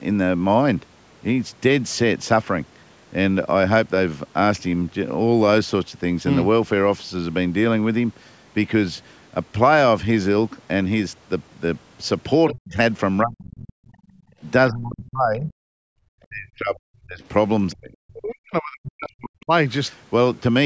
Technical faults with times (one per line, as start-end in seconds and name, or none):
12.48-12.77 speech suppressed in double talk
13.22-13.87 speech suppressed in double talk
14.31-14.35 speech suppressed in double talk
14.70-15.52 speech suppressed in double talk
15.80-15.91 background gated by the echo canceller
16.19-17.23 speech suppressed in double talk
17.73-19.51 speech suppressed in double talk